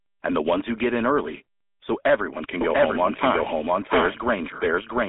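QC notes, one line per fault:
Throughout: GSM full-rate codec. The sound is squeezed into a line band of 250 Hz to 3.6 kHz, with nothing above 3.8 kHz. The codec damage is plainly audible as a buzzy, gravelly roughness from pulse-driven excitation, which fits a 13 kbps GSM full-rate stream.
2.61 s to end: doubled audio track. Right after "everyone can", a second full-band copy of the speech enters abruptly. It trails by roughly 0.7 s at about the same loudness, with no decay or room colour. It is likely a second capture path or an edit holding two out-of-step copies. It runs to the end.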